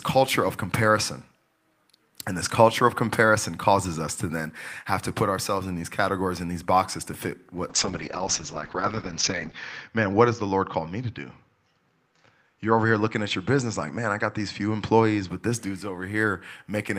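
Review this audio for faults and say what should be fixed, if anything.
From 7.7 to 15.35 s, after "these boxes to fit" and clearing by "this dude's", the speech turns rough and muffled, capped near 8 kHz instead of 20 kHz. This is a call bitrate drop. The encoder was starved of bits for about 1.85 s at its worst, which fits a fall from roughly 32 to 7 kbps. To prevent it, set a higher minimum bitrate floor and use smoother bandwidth-estimation recovery, so brief congestion doesn't force the codec this low.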